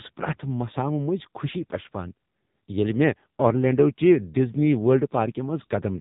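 AMR narrowband mobile codec throughout: speech rebuilt from sparse pulses, nothing above 3.8 kHz, heavily buzzy and synthetic, which fits a low mode near 6.7 kbps.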